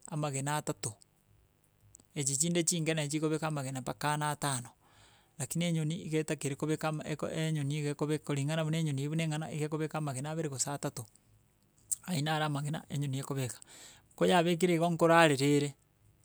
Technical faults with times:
0.00-16.24 mains buzz

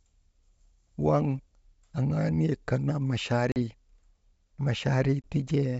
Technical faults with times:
3.52-3.57 packet loss on an ADPCM call
5.22-5.30 packet loss on an ADPCM call

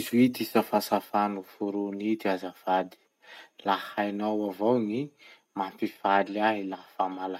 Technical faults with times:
0.56-0.94 microphone overload
1.02 microphone volume stepped down

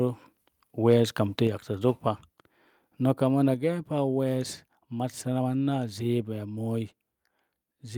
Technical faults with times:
1.47 microphone volume stepped down
3.54 microphone volume stepped down

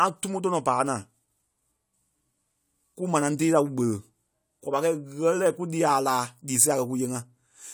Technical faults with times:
none

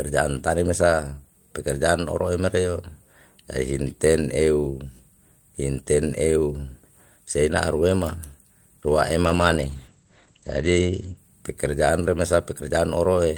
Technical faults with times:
9.25-11.23 call bitrate drop

